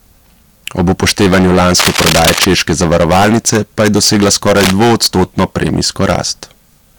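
A gain stage is driven about 22 dB past what it can pass, so the speech peaks are sheared flat throughout, with around a sixth of the samples cut off. This hard clipping adds high harmonics that make every loud syllable a harsh, buzzing fuzz.

From 1.79 to 2.45 s and again from 4.56 to 4.72 s, a bout of cable scratch noise breaks in, likely from a worn connector or lead being moved. Each burst is dense, uneven rustling, about as loud as the speech itself.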